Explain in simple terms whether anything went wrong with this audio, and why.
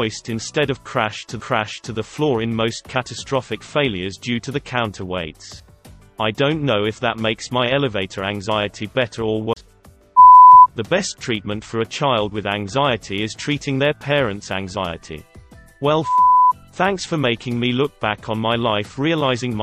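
The CD player's laser lost its place twice, knocked or thrown by a flaw onto a different turn of the disc's spiral. That is a CD skip. Each time, the player falls silent for a split second, leaving a tiny tick at 1.41 s and a longer gap of about 30 ms at 9.53 s. Then the sound carries on from a different spot on the disc, so it suddenly jumps ahead or back.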